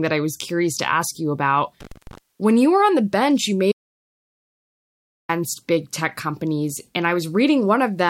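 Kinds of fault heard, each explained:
Intermittent contact: a loose connection briefly opens after "to ask you about" around 1.8 to 2.18 s, with crackle clicks at the edges, showing as vertical broadband streaks on a spectrogram.
Audio dropout to silence: after "on the bench you" the speech vanishes for about 1.57 s until "big tech companies", likely a lost input, leaving a silent gap with no room tone.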